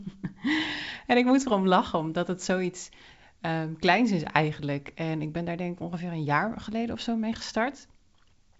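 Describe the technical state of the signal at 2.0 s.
At 2.0 s the speech is intact, carried over what sounds like G.722 wideband telephone coding at 64 kbit/s, with content reaching up to about 7.7 kHz.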